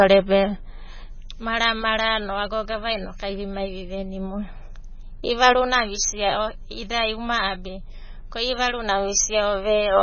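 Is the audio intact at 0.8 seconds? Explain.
No. At 0.8 seconds, as throughout, the speech carries heavy coding damage, likely from MP3 compression at a very low bitrate, around 17.5 kbps. Nothing remains above 6.6 kHz, and weak spectral lines flicker between frames, giving a watery, swirly texture with chirpy sibilants.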